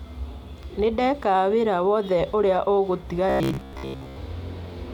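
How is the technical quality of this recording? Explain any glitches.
The recording has one glitch near the end. From 3.30 to 4.18 s the speech turns into robotic sound from repeated short buffers: a rigid, metallic buzz at about 66.8 Hz that still loosely tracks the speech. The likely cause is audio arriving too slowly, so a roughly 15 ms chunk gets replayed over most of that stretch. A spectrogram would show evenly spaced harmonic lines at 66.8 Hz intervals, and the waveform would show a repeating cycle.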